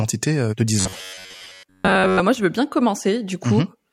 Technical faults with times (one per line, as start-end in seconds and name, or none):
0.80-2.20 robotic sound from repeated short buffers